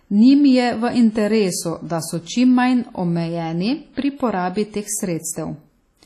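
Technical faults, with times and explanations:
Throughout, WMA compression: the speech sounds ringing and washy, with a hiss that swells and fades with it and nothing above 13 kHz. The likely cause is heavy transform coding at a low bitrate, around 32 kbps, which smears quantisation noise across long blocks and zeroes weak components.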